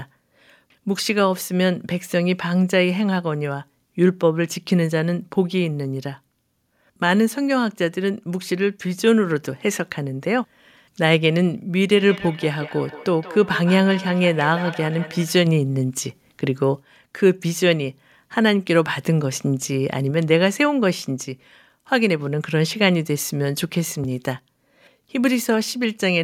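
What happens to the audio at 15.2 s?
Feedback echo between two devices, 11.96 to 15.43 s: one replays the other's microphone, so sound recurs about every 150 ms, thinner and ringing, unlike smooth reverb.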